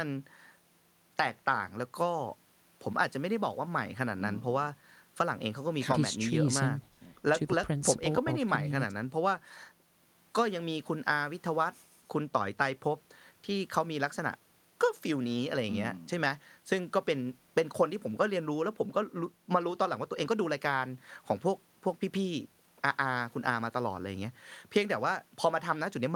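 Nothing in this speech recording stands out as a technical fault, so there's nothing to flag here.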